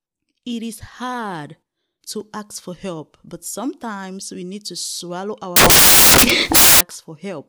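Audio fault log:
5.56–6.81 s, samples built from the wrong bytes: the speech is swamped by loud, harsh broadband noise for about 1.2 s, because each sample's bytes are assembled in the wrong order or offset, so the rapidly changing low bits land in the high-value position.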